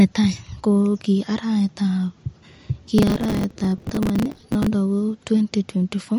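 Speech with a hard ceiling at 11.2 kHz, visible as a flat spectrogram edge, and watery, swirly detail, likely MP3 compression at a low bitrate near 47 kbps. From 2.98 to 4.67 s, processor overload crackle: dozens of roughly 5 ms buffers missed, filled with stale audio, showing as jagged waveform steps and vertical spectrogram streaks.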